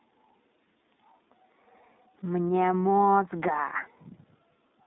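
From start to finish the speech carries iLBC codec damage, and it is plainly audible. The band is held to roughly 200 Hz to 3.7 kHz, so the low body and all upper sibilance are gone. Each 30 ms frame's excitation is coded on its own, which gives the sound a slightly rough, synthetic grain, consistent with the codec's 13.33 kbps mode.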